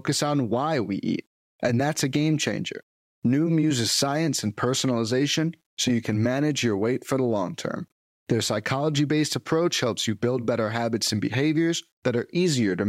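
Throughout, quiet passages of the speech turn grainy and gritty, likely from low bit depth without dither: roughly 10-bit rounding, leaving signal-following distortion around 50 dB down.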